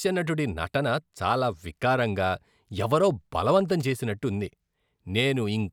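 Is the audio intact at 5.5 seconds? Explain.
Yes, at 5.5 seconds the speech plays through intact, with no dropout, click, distortion or other fault at that moment.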